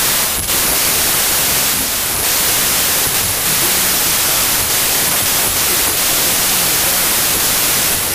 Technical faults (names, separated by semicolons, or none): wrong sample width